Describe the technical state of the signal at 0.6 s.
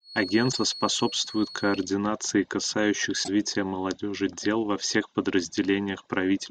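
At 0.6 s there's a thin, steady whistle sitting at 4.3 kHz, roughly 15 dB under the speech and wobbling a little in level. It runs from the very start of the clip to about 1.9 s. That's most likely a feedback whistle: the loudspeaker-to-microphone loop is parked right on the edge of feedback, so that one frequency keeps ringing without ever building up into a full howl.

Just before that moment, from 0.49 to 0.57 s, there's a short glitch from damaged data in a compressed stream. Some of the encoded bytes in that stretch were corrupted, so the decoder couldn't parse those frames, lost its place and had to hunt for the next valid frame header. You hear it as a brief blip lasting under a tenth of a second, and by 0.6 s the decoder has already locked back on.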